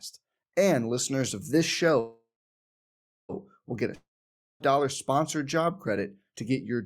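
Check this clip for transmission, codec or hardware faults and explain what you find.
Two transmission faults are audible in this speech.

From 1.99 to 3.32 s, after "listeners of this", there is a call audio freeze. Packets were likely held up and the jitter buffer emptied. The last sound fades out, leaving about 1.0 s of silence. Then "will get" resumes with nothing lost, now running about 1.3 s late.

From 3.95 to 4.63 s there is a long network dropout. Audio likely stopped arriving. The last sound fades, then about 0.55 s of silence follows. Speech returns at "sponsored job credit to", with roughly 0.66 s of audio missing.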